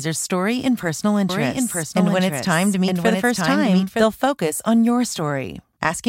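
From 1.29 s to 4.03 s, a doubled audio track appears. A second copy of the speech runs about a second behind, somewhat quieter than the original. It has no reverb tail. It starts and stops abruptly. A slower second capture path is likely.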